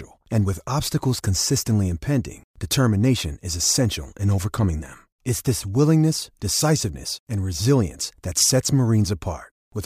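No technical faults can be heard anywhere in the speech. Nothing in the recording calls for comment from a fault-finding point of view.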